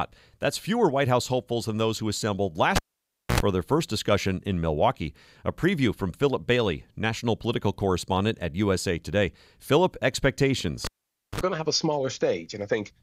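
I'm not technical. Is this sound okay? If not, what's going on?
No. Twice the sound pops, drops out for about half a second, gives a short electrical buzz, then pops back: from 2.76 to 3.40 s, right after "than those who assembled" and before "for their first discussion", and from 10.85 to 11.41 s, just before "going to have a". This is a cable pulled and plugged in while live. The buzz is mains hum (60 Hz first, 50 Hz second) picked up while the plug only half touches.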